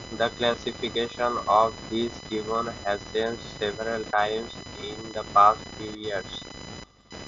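Computer activity noise runs throughout: processor and peripheral load shifts the audio ground, laying a scratchy buzz pulsing near 1 kHz roughly 15 dB below the speech. At 0.53 s and 4.12 s, concealed Bluetooth headset packet loss occurs. Lost audio of about 7.5 ms and then 15 ms is patched with repeated recent waveform, leaving the first loss nearly hidden and the second only a brief buzzy smear over the mSBC wideband speech.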